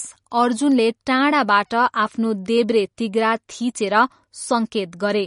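From start to end, the speech carries plainly audible codec damage, likely from MP3 compression. Nothing is heard above 10.5 kHz, so the treble stops at a hard ceiling. The encoder was short of bits, which fits a low bitrate around 40 kbps. It dropped the weak frequency lines, and they flicker on and off between frames. The result sounds watery and swirly. Sibilants turn metallic and chirpy, and sharp onsets smear.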